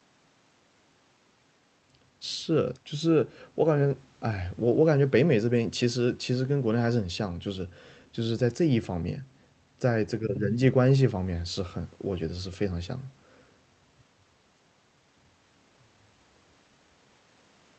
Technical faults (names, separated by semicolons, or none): none